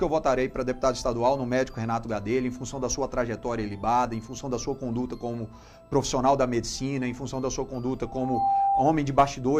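A single tone near 793 Hz swells out of the audio from 8.04 s, climbing for under half a second to sit a few decibels above everything else before stopping at 8.90 s. This is loudspeaker feedback squeal: a microphone re-amplified its own loudspeaker until that frequency ran away.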